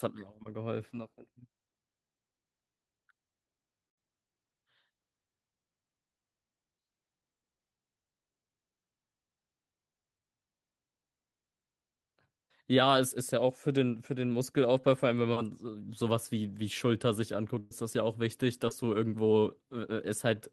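Short concealed packet loss at 0.43 s: about 20 ms of audio never reached the decoder in time. The receiver extended the preceding sound across the hole, leaving a brief smear before the real signal resumes.

Burst of packet loss at 3.89 to 3.99 s: about 80 ms went missing in a row. The decoder stretched the last sound for about 77 ms while lowering its level, so a held buzz or fading hiss stands in for the lost stretch, and the audio picks up further on.

Short concealed packet losses at 12.49 s, 14.81 s and 18.69 s each drop about 20 ms and patch it with a quick continuation of the preceding sound. This produces a brief smear or wobble. The events at 12.49 s and 18.69 s also stretch the timeline, by about 15 ms and 7 ms respectively.

The burst of packet loss at 17.59 to 17.73 s is the longest, with about 120 ms lost. Concealment fills nearly all of it with a fading extension of the prior sound rather than silence, and the signal resumes past the gap.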